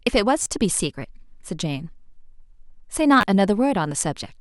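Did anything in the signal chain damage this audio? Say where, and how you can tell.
Yes: a repeated buffer at 0.43–0.46 s and 3.21–3.23 s, a driver-stage stutter where one roughly 11 ms slice, which fits a 512-sample buffer, replays three then two times, dropping about 30 and 20 ms.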